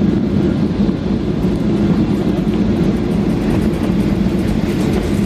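No technical faults are audible anywhere in the audio, so there is nothing to time or trace to a cause.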